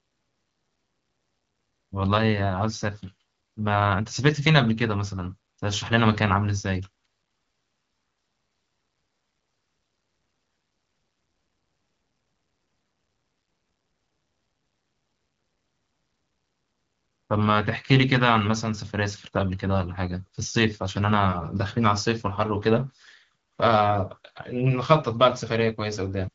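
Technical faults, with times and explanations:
Nothing in this speech clip stood out as a fault on listening, with the wideband phone codec carrying it as a 12.65 kbit/s HD Voice call would and nothing heard above about 7.5 kHz.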